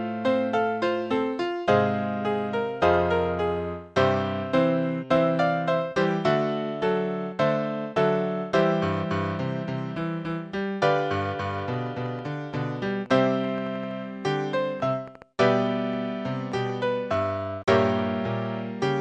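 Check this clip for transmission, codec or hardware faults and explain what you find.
One fault is present. A train of clicks runs from 11.0 to 16.7 s, likely from interference or a faulty connection injecting near-identical pulses. There are some forty irregular pops, about 6.7 per second, peaking roughly level with the sound.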